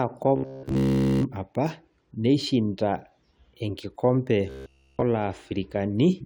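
Audio likely arrived too seldom, so roughly 15 ms buffers were replayed, producing robotic sound with a rigid 66.8 Hz buzz at 0.36–1.25 s, before "apa neishinda", and 4.50–5.02 s.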